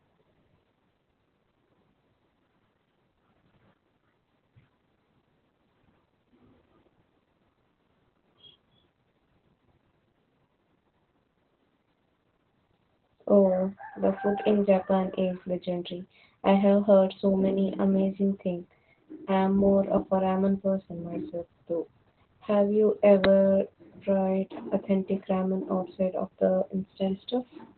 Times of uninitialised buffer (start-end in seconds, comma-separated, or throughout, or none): 23.24